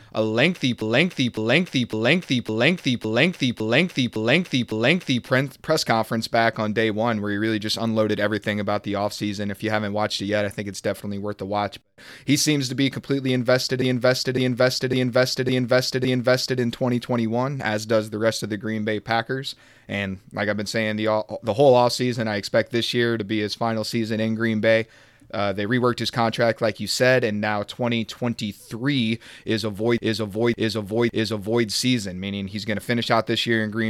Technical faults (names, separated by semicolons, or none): repeated frames